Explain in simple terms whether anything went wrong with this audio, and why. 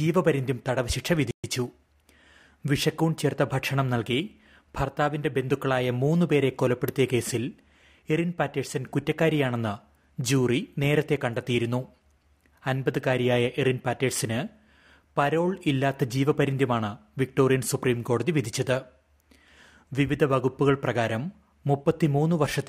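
A playback stall hits at 1.31 s: the sound cuts out mid-flow and stays silent for about 0.13 s, until 1.44 s. The likely cause is that the player ran short of incoming data, or was briefly held up, and had nothing to play.

Time-compressed catch-up follows from 1.44 to 2.28 s. To make up the delay, the player trims tiny slices out of the audio and blends the joins, so this stretch runs about 1.15 times faster than normal while keeping its usual pitch.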